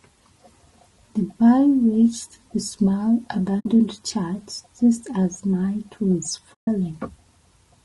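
Throughout, the speech sounds rough and grainy, likely from low-delay AAC compression (AAC-ELD) at a rate that fits about 32 kbps. On a spectrogram, noise smears between the harmonics and the top band looks thin and patchy.

AAC frame loss with muting opens a short gap from 3.60 to 3.66 s, about 60 ms, and a longer one from 6.54 to 6.68 s, about 140 ms. The decoder zeroed the missing spectrum, so both waveform holes fade out and back in with soft, tapered edges. On the spectrogram they appear as blank vertical bands.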